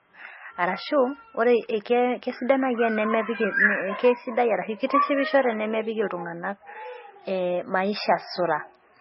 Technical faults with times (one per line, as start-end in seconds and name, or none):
0.00-9.00 MP3 compression